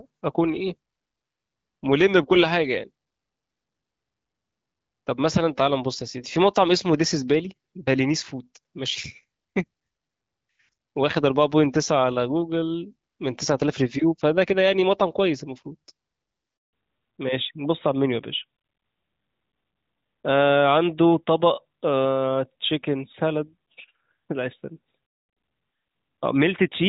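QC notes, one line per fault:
16.57–16.73 s, handover gap: the speech dies away within a few tens of milliseconds and stays silent for 160 ms while the call switches networks and no speech frames arrive. Anything said then is lost. The waveform shows a flat run, and the spectrogram a full-height blank stripe.
16.73 s to end, fallback to narrowband: nothing above 4 kHz remains, so speech sounds duller and rougher, pointing to a drop from HD Voice to a narrowband codec. The spectrogram shows a hard 4 kHz ceiling, where earlier energy reached about 7 kHz.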